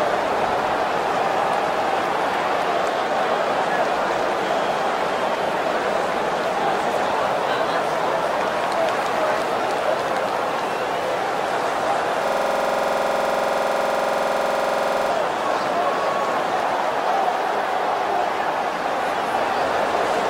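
At 12.28 s the audio locks into a system hang loop until 15.10 s. Something froze while the hardware kept replaying one 46.44 ms slice, consistent with a 2048-sample buffer, so you hear a rough, buzzy stutter at about 21.5 Hz, repeated 61 times.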